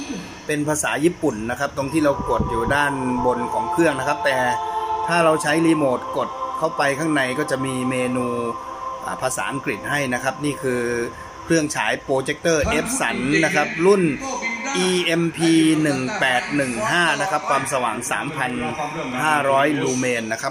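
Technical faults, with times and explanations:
17.44–20.42 s, train of clicks: about fifteen evenly spaced clicks, 4.7 per second, peaking near signal level. Likely interference or a faulty connection or power supply.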